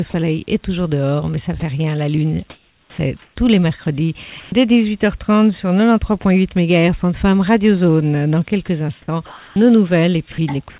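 Brief gaps filled with steady synthetic hiss appear at 0.10–0.14, 1.60–1.62, 6.22–6.24, 8.66–8.68 and 9.26–9.56 s, the last swallowing about 150 ms of the audio; this is likely sound dropped by the voice detector, which stopped sending and let comfort noise stand in. From 2.50 to 4.52 s and again from 10.32 to 10.78 s the audio turns choppy, consistent with sound chopped by the voice detector switching transmission on and off repeatedly. Throughout, nothing is heard above 4 kHz, as expected of a narrowband call path.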